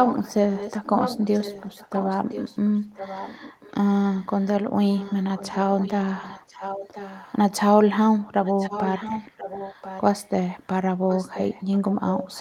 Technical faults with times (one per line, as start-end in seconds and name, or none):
0.00-3.71 echo leak
4.19-4.47 echo leak
4.91-7.37 echo leak
8.45-10.31 echo leak
11.09-12.41 echo leak